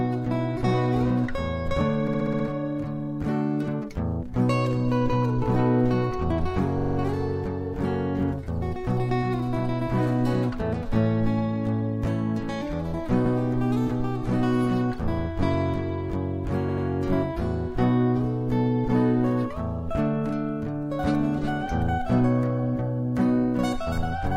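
Repeated frames occur at 2.07 to 2.45 s, 6.78 to 6.95 s, 13.25 to 13.33 s and 16.68 to 16.85 s. In each, a block of compressed audio was delivered more than once, so the decoder plays the same slice again and the sound stutters. The repeated slices last 64 ms, heard six extra times; 43 ms, four extra times; 85 ms, once extra; and 85 ms, twice extra. Together they lengthen the audio by about 0.81 s.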